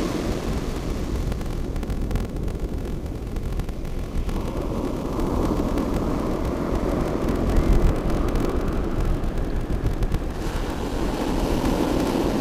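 Block size mismatch (padded) runs throughout: each 1024-sample block is only partly filled, about 882 samples, and the rest is zero-padded. The gaps produce a 43.1 Hz buzz, and the sound runs at 0.861 speed with its timbre unchanged.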